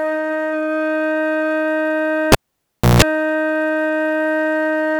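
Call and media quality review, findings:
Cable pulled and plugged in, music, 2.32 to 3.02 s. Pop at 2.32 s, then about 0.65 s unplugged, mostly near silence, as the live connector leaves the jack. Signal path broken at the input cable or jack.

During the dropout, 60 Hz mains buzz for about 160 ms while only the tip contacts and the ground is still open. Second pop at 3.02 s as full contact restores the music.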